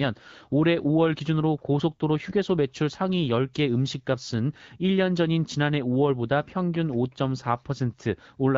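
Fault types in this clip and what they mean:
There are no fault types in this clip.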